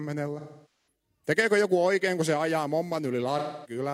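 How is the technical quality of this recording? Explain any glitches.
The speech has two glitches, both AAC frame loss with concealment, at 0.39 to 0.87 s and 3.38 to 3.79 s. Compressed frames went missing, which fits roughly eleven and six lost frames. The decoder patched each gap from the last good spectrum, so those stretches sound smeared and noisy instead of falling silent.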